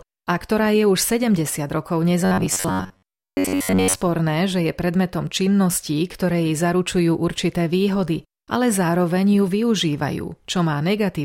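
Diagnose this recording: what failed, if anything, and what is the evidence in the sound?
At the driver or buffer stage, audio likely arrived too seldom, so a block of about 10.7 ms was replayed while most of the speech was skipped. From 2.25 to 4.01 s this produces robotic sound from repeated short buffers, a rigid metallic 93.8 Hz buzz.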